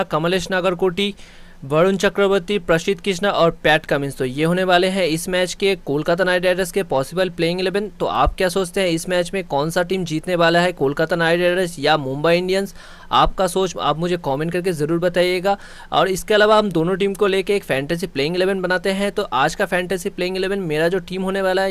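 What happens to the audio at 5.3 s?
Nothing goes wrong at 5.3 s; the audio plays through that moment cleanly, with no dropout, click, glitch or other fault.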